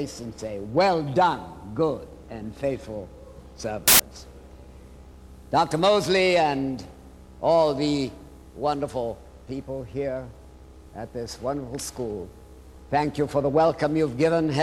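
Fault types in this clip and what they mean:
File tags played as audio: from 3.88 to 4.00 s, a 0.12 s burst of very loud white noise with hard edges, which fits compressed data such as an embedded cover picture read as samples. Unlike a click or dropout, it is sustained static unrelated to the surrounding sound.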